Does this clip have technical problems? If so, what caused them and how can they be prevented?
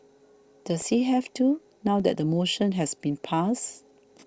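Yes. The output buffer briefly ran dry in two underruns with held sample, at 0.82 s and 2.00 s, and the converter froze on its last value for about 1 ms and 2 ms. The speech flattens to a held level, then resumes with that stretch of audio lost. Giving the playback buffer more headroom or raising the audio thread's priority would prevent it.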